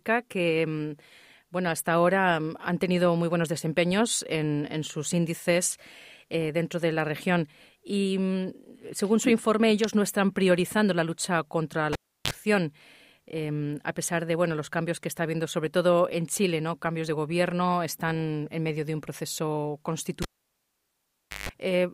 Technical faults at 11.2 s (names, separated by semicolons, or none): none